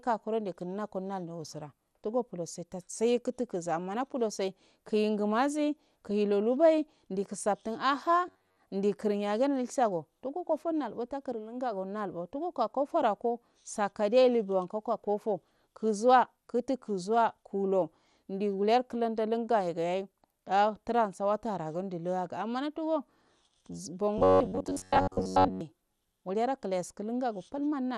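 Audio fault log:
throughout: MP2 compression. Dull, gurgling, granular sound, likely from heavy MP2 coding at a rate near 80 kbps. On a spectrogram the upper sub-bands flicker on and off as missing blocks.
6.10 s: DAB burbling. A brief blip where bit errors slipped past error correction. Wrong samples put short noise blips in single sub-bands, showing as bright isolated rectangles on the spectrogram.
8.28–8.58 s and 24.18–25.61 s: robotic sound from repeated short buffers. Rigid metallic buzz at 93.8 Hz, likely from a segment of about 10.7 ms replaying in place of most of the real audio. The waveform shows identical repeating cycles, and the spectrogram shows even harmonic lines.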